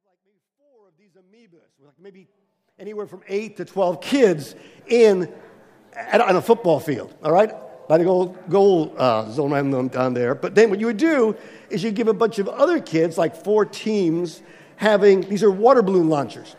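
Nothing is technically wrong with this audio; the gradual rise in level over roughly its first 4.3 seconds is an ordinary edit, not a problem.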